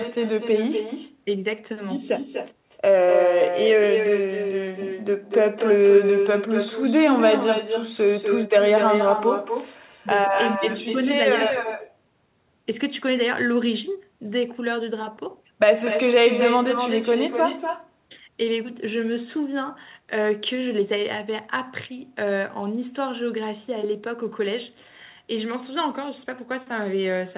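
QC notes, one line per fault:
Throughout, echo with no canceller: far-end loudspeaker pickup returns each phrase about a fifth of a second later, about 6 dB down, discrete, unlike reverb.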